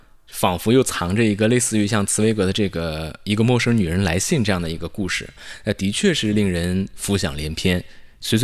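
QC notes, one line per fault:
No faults detected anywhere in the speech.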